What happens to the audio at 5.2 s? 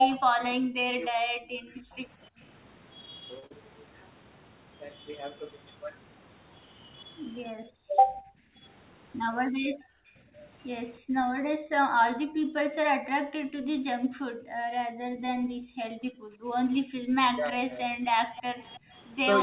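At 5.2 s the speech is intact, with nothing beyond the narrowband sound of the call path, whose codec leaves nothing above 4 kHz.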